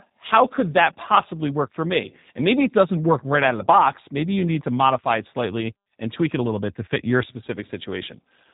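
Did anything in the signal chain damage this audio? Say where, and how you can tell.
Yes. The damage is at the codec stage, throughout the speech: a G.729 codec. Nothing passes above about 3.8 kHz, and the voice sounds rough and synthetic, which fits an 8 kbit/s codec rebuilding speech from a vocal-tract filter and pitch predictor. A simple low-pass filter would dull the sound without that artificial roughness.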